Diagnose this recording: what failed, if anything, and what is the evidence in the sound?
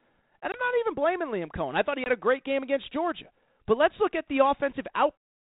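Packet loss on an ADPCM call, a network-stage fault, at 0.52 to 0.61 s and 2.04 to 2.09 s. Each event opens with a hard-edged 20 ms hole, about one lost packet, after which the sound returns briefly distorted as the decoder's predictor and step size, left out of step with the sender's, recover. On a waveform this appears as a flat gap. A spectrogram shows a blank vertical band.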